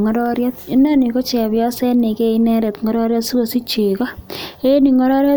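Nothing stood out as a technical fault on listening to this speech.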